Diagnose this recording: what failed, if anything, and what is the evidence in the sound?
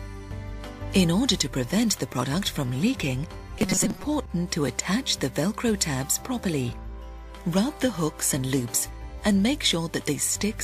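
Robotic sound from repeated short buffers, 3.59 to 4.04 s: a rigid 188 Hz buzz replaces most of the sound, likely a driver or buffer stage looping a roughly 5 ms buffer.

Repeated frames, 4.25 to 4.30 s: a brief stutter where one 40 ms block plays again, adding 40 ms, which points to duplicated codec frames at the storage or transmission stage.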